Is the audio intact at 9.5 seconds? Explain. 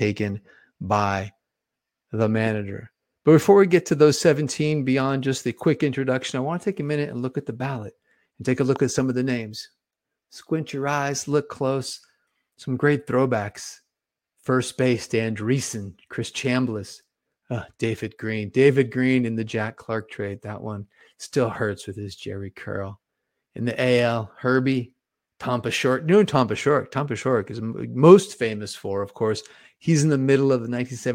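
Yes, the audio at 9.5 seconds is intact, with no dropout, glitch or other fault audible at that point.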